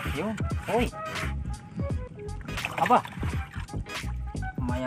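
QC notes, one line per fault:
Throughout, MP2 compression: dull, gurgling, granular sound as upper sub-bands flicker off, unlike steady low-pass dullness; likely a low bitrate around 80 kbps.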